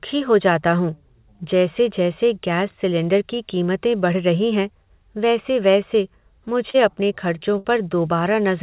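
Short concealed packet loss at 6.70 to 6.76 s, just before "अपने खर्चों": about 40 ms of the call arrived too late for the decoder, so the receiver extended the preceding sound for roughly 38 ms and blended back, leaving a brief smear where the original detail is gone.

Burst of packet loss at 7.58 to 7.66 s, right after "अपने खर्चों": several consecutive packets, about 60 ms of audio, never made it in time. The receiver carried the last sound forward for about 64 ms while lowering its level, so it fades out before the speech picks up again with that stretch skipped. Both gaps sit inside band-limited telephone audio with nothing above 4 kHz, which fits a G.711 A-law call.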